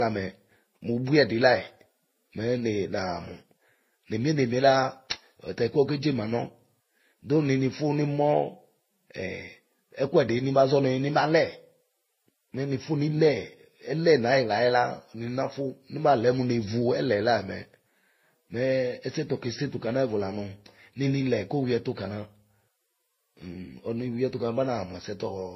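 From start to finish the speech carries layered compression damage consistent with transcoding between lossy codecs. Nothing is present above 5.8 kHz, so sibilants sound dull and clipped. On top of that sit smeared, warbling artefacts of more than one kind. The likely cause is a chain of low-bitrate encodes, an MP3 stage, then HE-AAC, then Vorbis, with each encoder spending bits re-coding the previous one's errors.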